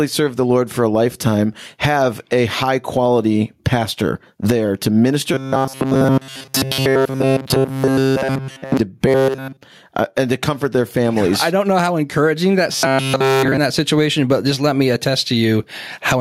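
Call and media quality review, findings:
Gain pumping, whole clip: level pumps with a swing of around 20 dB. Likely mic gain set way too high, so a fast limiter clamps every peak and squashes the dynamics.

Robotic sound from repeated short buffers at 5.34–8.77 s, 9.08–9.61 s and 12.72–13.58 s: rigid metallic buzz at 134 Hz, loosely tracking the speech. Likely starved playback looping a roughly 7.5 ms chunk, with essentially all real audio skipped.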